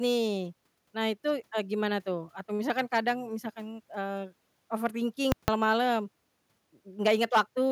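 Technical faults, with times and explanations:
5.32–5.48 s, invalid numbers at full scale: a loud pop, then silence, then another pop, as invalid values pinned the output at one extreme value for 160 ms.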